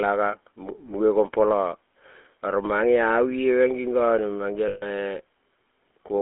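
GSM full-rate coding runs through the whole speech clip. The voice is rebuilt from a vocal-tract model fed by a sparse pulse excitation, leaving a plainly audible buzzy, gravelly roughness. The band is held to roughly 250 Hz to 3.4 kHz, which fits the 13 kbps full-rate codec.

Lost GSM frames occur from 4.68 to 4.84 s, about 0.14 s of missing signal, which fits seven 20 ms frames. The decoder repeats the last good frame's settings, so the sound freezes into a short, rough metallic ring.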